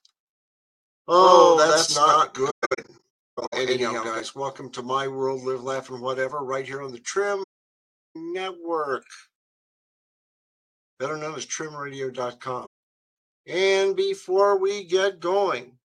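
Doubled audio track runs from the very start until 4.2 s: the sound is heard twice, with a full-band copy at roughly equal level trailing by about a tenth of a second, dry and without room colour, and cutting off abruptly. The likely cause is a second, slower capture path or an edit holding two copies out of step. AAC frame loss with muting appears three times. From 2.50 to 3.54 s, short holes scattered over about a second remove about 660 ms in total, the longest run lasting around 150 ms. From 7.43 to 8.16 s, about 725 ms is blanked. At 12.66 to 12.75 s, a 171 ms gap follows. Each hole fades out and back in smoothly, because the decoder zeroed the spectrum of the missing frames, which fits frames of about 21 ms, and the overlapping windows soften the edges.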